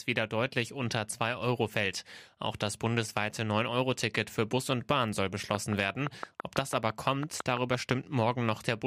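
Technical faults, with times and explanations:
5.55 to 7.92 s, train of clicks: about fifteen similar pops at a steady 5.9 per second, some 15 dB above the speech, likely from interference; regular spacing separates it from random crackle.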